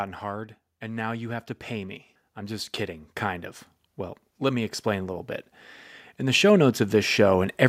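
From 0.8 to 3.56 s, then again from 6.18 to 7.63 s, automatic gain rising lifts the level by about 9 dB and then about 6 dB, as the control judges the input too quiet. Speech and background noise swell together gradually, unlike a speaker simply talking louder.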